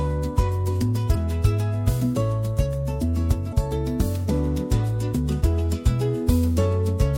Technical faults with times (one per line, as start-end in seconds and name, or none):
1.11-1.16 damaged data in a compressed stream
3.49-3.53 damaged data in a compressed stream